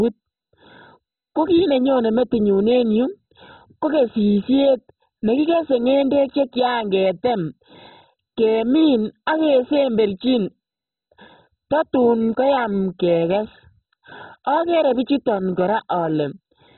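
From start to finish the speech carries heavy MP2 compression damage, with nothing above 4 kHz. The likely cause is a low bitrate MPEG Layer II encode, which fits about 16 kbps. Too few bits forced the upper sub-bands off and left the remaining ones coarsely quantised. It sounds dull and muffled, with a gurgling, granular roughness. A spectrogram would show a hard ceiling at 4 kHz and blocky, flickering energy in the bands below.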